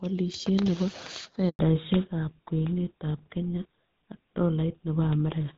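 At 1.49 s a handover gap opens as the call switches networks and no speech frames arrive, so the sound cuts out for 100 ms until 1.59 s. From 1.59 s to the end, a fallback to narrowband, most plausibly to a GSM full-rate codec, replaces the cleaner HD Voice AMR-WB coding. Nothing above 4 kHz remains, leaving the speech duller and rougher.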